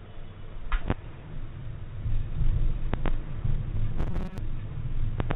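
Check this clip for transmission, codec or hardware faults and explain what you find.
One transmission fault stands out. From 3.98 to 4.38 s, robotic sound from repeated short buffers: a rigid, metallic buzz near 188 Hz, likely because late audio was replaced by repeating a segment of about 5.3 ms, with roughly half the material looped. A real pitch change would not have this fixed buzz that loosely traces the sound. The band-limited tone throughout, with nothing above 4 kHz, fits the G.711 A-law call path at 64 kbps.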